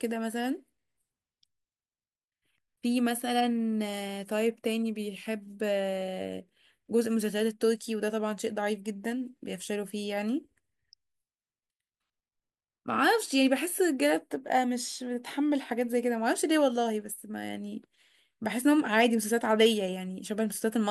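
No technical faults are audible anywhere in the speech recording.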